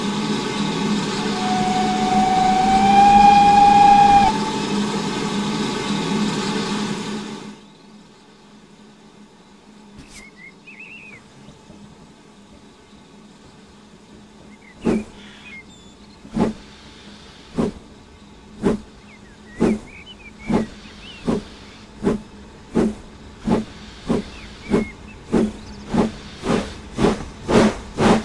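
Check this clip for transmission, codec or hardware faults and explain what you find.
Nothing in the signal points to a transmission, codec or hardware problem; it holds steady throughout with no audible disruption of any kind.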